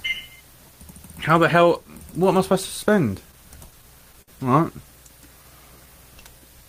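Between 3.71 and 4.30 s the audio breaks into repeated stalls (stutter): four times the jitter buffer ran dry, and the receiver held the last sound over the gap, for 88 ms of filled time and a longest hold of 60 ms. Unlike packet loss, nothing is dropped. The sound just hiccups and drags.

From 5.36 to 6.41 s a jitter buffer slow-down stretches the sound by 71 ms, so it plays at 94% speed while the pitch stays put. The receiver repeated tiny pitch periods to rebuild its reserve, giving a smooth, drawn-out sluggishness rather than stop-start hiccups.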